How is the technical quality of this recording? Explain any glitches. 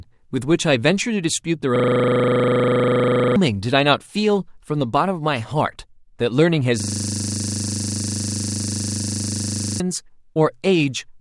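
The recording is marred by two system hang loops that replace stretches of speech with a mechanical drone. From 1.76 to 3.36 s, and again from 6.8 to 9.8 s, a 40 ms fragment repeats exactly at 25 Hz, producing a steady, rough buzz. The computer or driver stalled while the audio hardware kept replaying the same small ring buffer. The gaps lose roughly one and a half and three seconds of speech.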